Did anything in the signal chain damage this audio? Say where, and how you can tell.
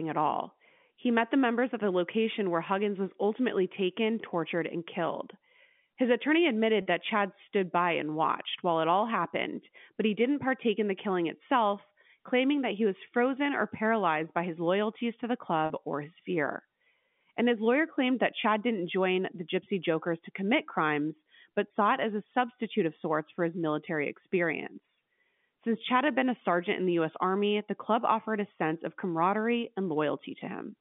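Yes, at the network stage. At 6.82, 15.66 and 21.68 s the speech holds a brief buzzy, frozen tone for 40, 40 and 20 ms. That is packet loss with pitch repetition: the receiver looped the last pitch period across gaps fitting two, two and one 20 ms packets.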